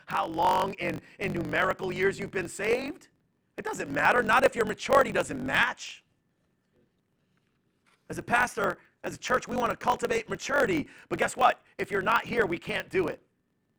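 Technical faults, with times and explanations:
Throughout: block size mismatch (truncated). Each block's end is discarded, giving a steady 46.9 Hz buzz and speech running 1.12 times fast, which fits 1024-sample reads.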